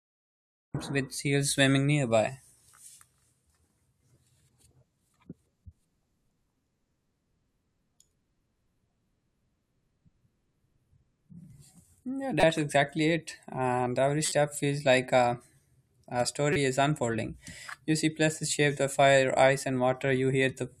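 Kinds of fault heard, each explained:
Cut-off start: The recording began late. Digital silence runs to 0.75 s, then the speech enters abruptly in the middle of a sound, just before "with seals swimming nearby". There is no natural attack or fade-in. The opening is simply chopped.
Corrupt frame decoded: Damaged compressed frames were played anyway. The decoder put energy at the wrong frequencies. Short bursts occur at 12.40 s, 14.26 s, before "feels like a", and 16.53 s, before "is unfolding". Each lasts about one or two frames and peaks around -10 to -15 dBFS.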